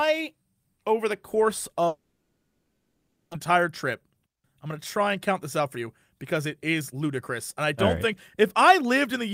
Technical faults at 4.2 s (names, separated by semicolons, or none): jitter buffer speed-up